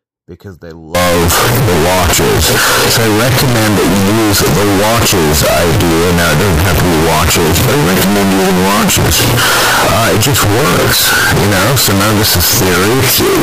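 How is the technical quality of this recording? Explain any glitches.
Technical quality is poor for most of the recording. From 0.95 s, just after "because they", to the end, the speech turns into harsh, extremely loud, squared-off sound. This is float read as integer. The 32-bit float samples were likely decoded as 32-bit integers. The sign and exponent bits then dominate every value, so the waveform sits at an almost fixed, high level. Background noise becomes as loud as the speech, but the pitch of the speech can still be followed.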